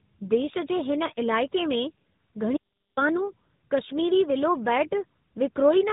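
The whole clip has the sound of tandem speech coding: the speech went through two speech codecs in a row, decoded back to plain audio in between, so the second coder was working on output the first had already roughened. You hear it as a gritty, warbly texture on top of the muffling, with nothing above 3.8 kHz. The character points to a GSM full-rate leg followed by AMR narrowband at around 12.2 kbit/s.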